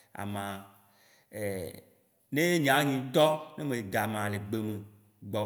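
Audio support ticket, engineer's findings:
No faults found on playback.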